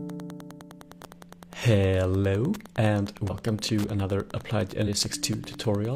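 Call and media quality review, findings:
Wi-Fi interference, whole clip: steady ticking roughly ten times a second, sitting about 25 dB under the signal. The spacing matches a 102.4 ms beacon period, so a nearby Wi-Fi radio is getting rectified in the analog audio path. Probable component: mic preamp or cabling close to the wireless module. Worth checking shielding and how close the antenna is.

Compressed frames skipped, 3.25–3.31 s and 4.83–4.89 s: short blips where the audio jumps ahead. Each jump is around 100 ms, about two 46.4 ms codec frames, so whole frames were missing or rejected as corrupt by the decoder. Probable component: transport or decoder, so look at packet loss or file damage around those points.

Processor overload crackle, 4.99–5.53 s: a gritty burst of crackle riding on the sound, made of a run of tiny hard-edged silent gaps. That points to buffers of about 5 ms missing their processing deadline again and again, each one filled with silence. 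It clears once the load passes. Probable component: the audio thread getting starved on the playback or capture host, so check for a CPU spike in that window.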